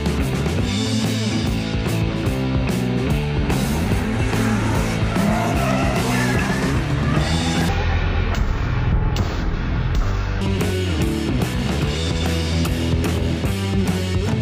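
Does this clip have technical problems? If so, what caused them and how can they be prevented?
Yes. From 7.69 s to 10.41 s the audio is a stereo stream read as mono. The player takes left and right samples in turn as one channel. Playback drops to half speed and falls an octave, 12 semitones. Prevent this by declaring the correct channel count when opening the stream.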